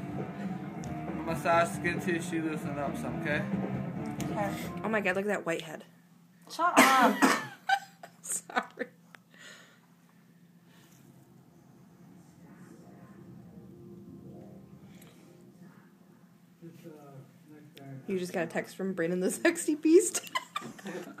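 No technical faults can be heard anywhere in this audio.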